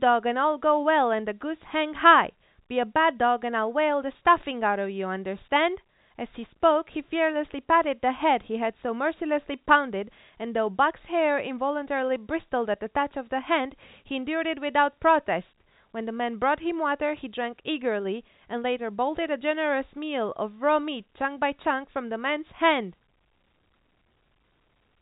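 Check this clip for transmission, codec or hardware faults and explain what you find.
Checking this clip turns up no faults to explain.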